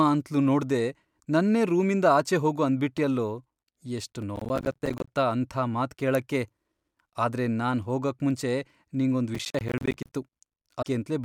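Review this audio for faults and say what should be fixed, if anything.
Two sharp clicks sit at 2.98 s and 4.22 s. Each is a case of dropped samples: well under a millisecond of audio is missing, so the waveform jumps straight from one value to a later one and the stream splices together with a step. Nothing audible is lost, but each step gives a single click. On a spectrogram each appears as a thin vertical line across all frequencies, and on the waveform as a sudden discontinuity. The likely cause is a brief sample loss in capture or transfer. Prevention: use a capture path with adequate buffering so samples are never discarded.

Processor overload crackle runs from 4.36 to 5.08 s and again from 9.35 to 10.15 s. The processor repeatedly failed to deliver audio buffers on time, and each missed buffer was filled with silence. The result is a gritty, tearing crackle over the speech. The gaps fit buffers of around 10 ms. 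On the waveform, the signal is chopped by dozens of hard-edged flat gaps. On a spectrogram, a dense comb of vertical broadband lines spans each stretch. Prevention: raise the buffer size or reduce the processing load so every deadline is met.

At 10.81 to 10.86 s there is a short disturbance with a skip forward in the audio. This is a broken MP3 bit reservoir. Frames were likely cut out of the stream, so the next frame reached back for borrowed data and decoded bytes belonging to another frame. The damage spans about two frames of 24 ms. On a spectrogram it shows as a short disrupted patch that breaks the harmonic pattern, with an abrupt edge in the waveform. Prevention: cut or stream MP3 only at frame boundaries with intact reservoir data, or re-encode from the source.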